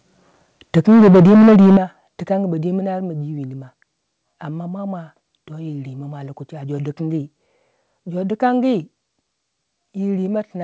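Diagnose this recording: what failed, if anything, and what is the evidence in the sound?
From 0.77 to 1.77 s the speech turns harsh and crackly on its loudest syllables, with the waveform peaks flattened. This points to microphone overload at the converter, likely from an input volume set too high, driving peaks about 8 dB past full scale so that roughly a third of the samples in that second are clipped. Unlike codec distortion, the crackle follows the loudness of each syllable and stops once the level comes down.

The level then drops twice in sudden steps, about 2 dB at 0.78 s and about 10 dB at 1.77 s, the second right as the clipped stretch ends. This is the microphone volume stepped down by the call processing, likely its automatic gain control cutting the device input after detecting overload. A compressor or fade would ride the level smoothly and act only on loud moments, but here the background noise falls by the same amount as the speech, in single jumps.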